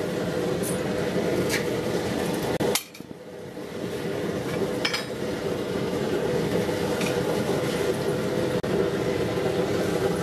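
Brief silent dropouts with slightly blurred edges cut into the continuous sound at 2.57 s (about 32 ms) and 8.60 s (about 34 ms), six seconds apart. These are gaps at a join of encoded pieces, where untrimmed encoder delay and end padding were left in.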